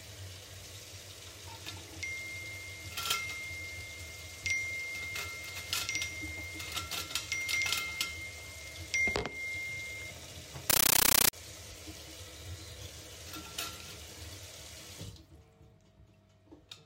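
A recording of everyday sounds, and from 10.70 to 11.33 s it turns into loud, chattering static: a compressed stream played as audio. Undecoded AC-3 data is being treated as samples, giving 13.3 ms noise bursts 31.25 times a second, with silent padding between.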